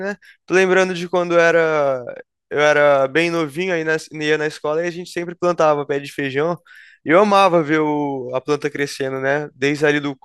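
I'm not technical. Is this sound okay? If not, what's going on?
Yes, nothing in this recording points to a technical problem with how the signal was captured or carried.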